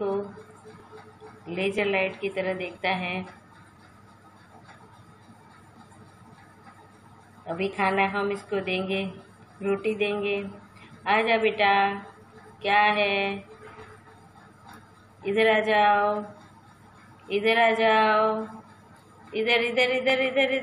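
Overlap between stream segments at 0.80, 1.79, 2.78, 3.77, 5.76 and 7.73 s: adjacent 1.0 s segments claim overlapping time stamps, so 5 to 17 milliseconds of genuine sound are discarded at each boundary. The waveform jumps, giving short clicks or tiny skips at the segment boundaries.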